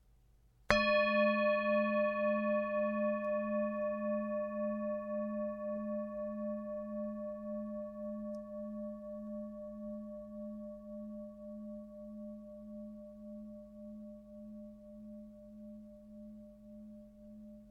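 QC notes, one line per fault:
No fault found.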